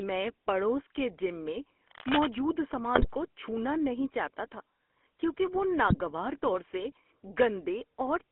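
Throughout, the speech has passed through the GSM full-rate codec, which models the vocal tract and drives it with coarsely spaced excitation pulses. The line is limited to 250 Hz to 3.4 kHz, and the sound fits a 13 kbps full-rate stream. The result is plainly audible buzzy, gravelly roughness.

From 1.87 to 2.27 s comes cable scratch noise, likely from a worn cable or connector being moved so its contact resistance jumps around. This adds dense, ragged bursts of scratching and rustling, nearly as loud as the speech itself.

GSM bit errors strike at 2.94 to 3.15 s and again at 5.86 to 5.95 s. Corrupted filter, pitch and gain values reached the decoder, about ten frames' worth in the first burst and five in the second. This twists the spectrum and level, so the speech breaks into squawks, pops and gargling.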